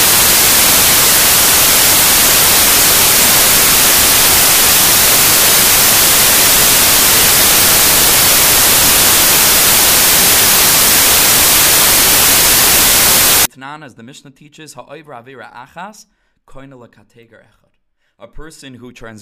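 Samples built from the wrong bytes, 0 to 13.45 s: misordered bytes promote the fast-changing low bits, turning the speech into loud, harsh broadband noise.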